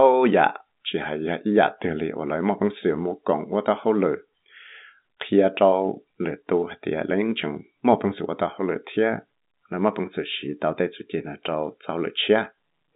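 No faults can be heard in this speech, which arrives over an ordinary telephone path using G.711 A-law coding at 64 kbps, with the line band running from 150 Hz to 3.7 kHz and nothing present above 3.8 kHz.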